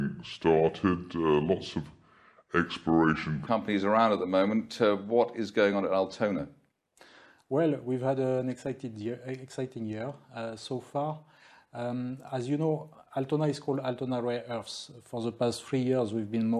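For the first 3.47 seconds the audio drags and sits low, the classic wrong sample rate fault. Everything plays at about 0.73 times normal speed and drops roughly 5.5 semitones, with pitch and tempo sliding down together because nothing converted the samples before playback. That ratio fits material captured at 44.1 kHz being clocked out at 32 kHz, so the stretch and the lowered pitch come from the same mismatch.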